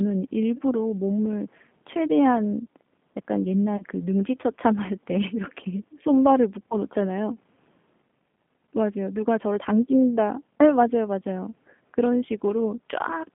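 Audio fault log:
Throughout: G.729 codec. The speech is confined to a narrow line band from roughly 150 Hz to 3.5 kHz and has a slightly rough, synthetic grain, which fits an 8 kbit/s codec such as G.729A. Each 10 ms frame is rebuilt from a vocal tract filter, a pitch predictor and a few pulses rather than from the waveform itself. That sparse pulse excitation gives a buzzy, reconstructed texture. Plain band-limiting would only dull the sound and would not add this texture.
3.77 to 3.83 s: VoIP packet loss concealed by the speech codec. About 30 ms of audio went missing, which points to a single lost packet. The decoder filled the gap by repeating its last pitch and filter settings while lowering the gain, so the sound smears into a buzzy tone or coloured noise that fades instead of a click or a silent dropout. Because each frame builds on the previous one, the audio stays weak or distorted for tens of milliseconds after the gap. 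A hard glitch would recover instantly.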